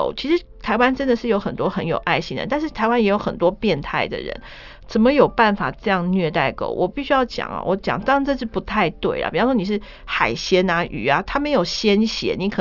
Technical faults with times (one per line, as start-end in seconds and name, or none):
none